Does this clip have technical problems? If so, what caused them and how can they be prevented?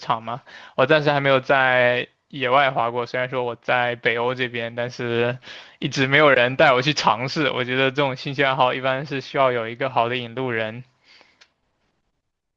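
No, there are no technical problems in this speech.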